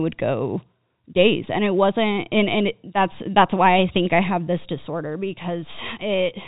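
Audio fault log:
Nothing stood out on listening to this telephone-band speech.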